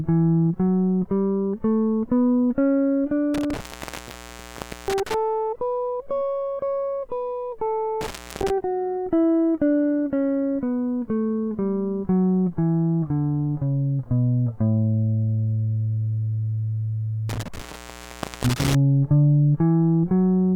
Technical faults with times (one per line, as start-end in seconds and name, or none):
3.34-5.14 intermittent contact
8.01-8.50 intermittent contact
17.29-18.75 intermittent contact